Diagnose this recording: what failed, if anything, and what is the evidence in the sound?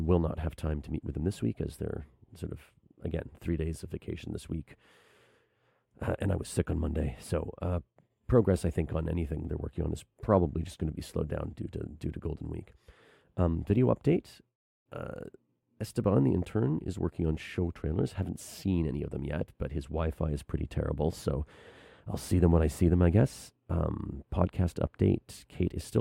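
Nothing failed; no faults found.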